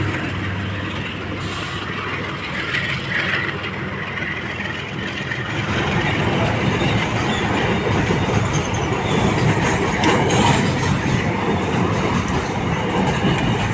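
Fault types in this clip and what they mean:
Nothing stood out as a problem on listening to the audio.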